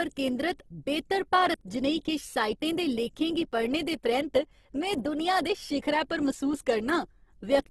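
Throughout the speech, the sound is grainy and rough, with a noisy texture and nothing above 12.3 kHz. This is likely Opus compression in its music (CELT) mode. At a rate that fits roughly 16 kbps, the encoder runs short of bits and fills bands with folded or noise-like content rather than leaving gaps. The result is grit instead of swirl, with the top band cut off.

At 1.54, 3.52 and 5.50 s, the speech jumps forward abruptly. A sliver of about 20 ms vanishes and the two edges butt together with no silence between them. This is audio missing between chunks. The regular spacing of about 2 s points to a recorder or processor working in 2-second blocks, likely dropping a short piece each time it closes one block and opens the next.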